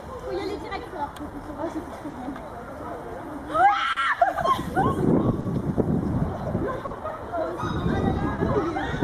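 All through the clip the timing wobbles slightly: small hiccups recur at uneven intervals, where a sliver of sound seems held or repeated and the flow briefly catches. This is clock drift between sender and receiver. The sender's clock runs roughly 3 percent slow, so the receiver's jitter buffer keeps draining. The receiver has to pad the gap by repeating short pieces, and now and then the buffer empties outright.

At 2.10, 3.93, 5.41, 6.87 and 8.35 s the sound stretches unnaturally for a moment, each time over about 60 ms, with a faint buzzy or dipped quality before it carries on. Nothing seems skipped. Each is a short stall from a late packet: the packet arrived about 40 ms behind schedule, the buffer ran dry, and the receiver held the last sound to fill roughly 40 ms before resuming where it left off.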